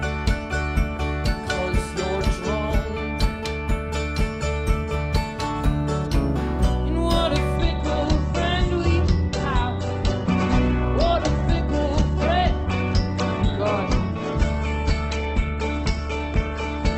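At 7.56 s the adaptive stream, likely responding to a slowing connection, drops to a lower bitrate and stays there to the end of the clip. The step from an Opus encode, consistent with about 64 kbit/s, down to one nearer 12 kbit/s is abrupt but gapless. From that moment the top end is cut away, with nothing above 8.2 kHz, so the sound turns dull, and coding artefacts rise.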